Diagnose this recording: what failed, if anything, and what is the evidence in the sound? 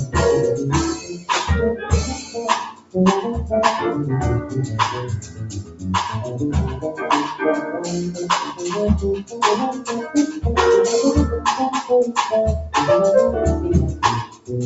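Noise suppressor applied to music or sounds, throughout: this is a call-processing failure. A suppressor tuned for speech stayed active on this material, so it treats steady parts and decaying tails as noise. The level keeps swinging by roughly 10 dB as the attenuation moves.

Sound cut by the noise suppressor, at 0.94–1.29, 1.75–1.91, 2.07–2.41, 2.71–2.96, 5.2–5.87, 9.18–9.4 and 14.24–14.51 s: the suppressor judged these stretches to be noise and pulled them down by about 8 to 15 dB. The deepest drop, about 15 dB, comes at 2.71 s. The Opus call path stops at 8 kHz, which fits its bandwidth.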